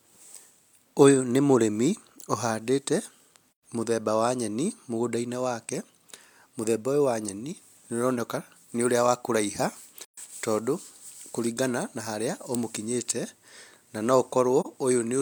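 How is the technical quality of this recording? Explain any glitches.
The speech has three brief dropouts caused by AAC frame loss with muting, at 3.53 to 3.62 s, 10.01 to 10.18 s and 14.60 to 14.66 s. Chunks of the coded stream went missing, and the decoder filled each gap with silence. The first two gaps are consistent with about three lost frames, roughly 128 ms each, and the last with a single frame near 43 ms. Overlapping windows fade the sound out and back in, so the first two gaps are soft-edged holes and the last is a brief dip.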